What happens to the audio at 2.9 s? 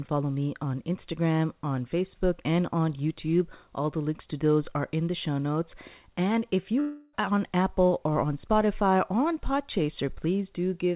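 Nothing goes wrong at 2.9 s: the speech carries on intact through that moment, with only the steady narrowband sound of the call path, which passes nothing above 4 kHz.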